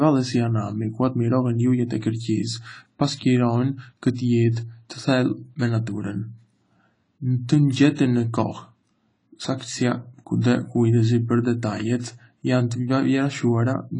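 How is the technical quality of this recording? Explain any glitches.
The recording has one clear fault, and it runs through the whole clip. The speech carries plainly audible AAC compression damage from start to finish. Nothing is heard above 10 kHz, so the top end sounds dull. The likely cause is AAC-LC at a low bitrate, which fits about 24 kbps. The encoder quantises each frame's spectrum coarsely and drops the highest band. Sibilants turn smeared and fizzy, and sustained sounds warble.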